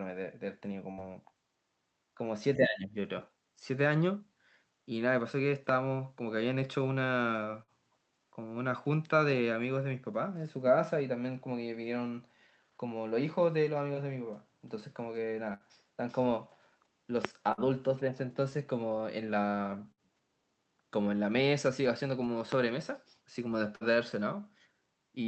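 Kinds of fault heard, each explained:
Burst of packet loss: Six times, about 60 ms of speech drops out. The last sound is stretched and fades, then speech resumes further on.
Speech suppressed in double talk: Near 2.6 s the speech dips by roughly 15 dB for about 0.4 s, likely an echo canceller ducking both talkers.
Loud pop: Three single sharp pops, at 5.69, 17.25 and 22.52 s, stand roughly 15 to 20 dB above the speech. Each is likely a brief voltage spike.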